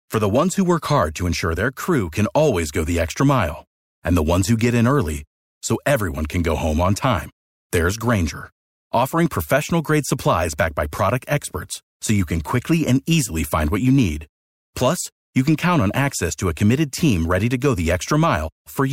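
No technical faults are audible.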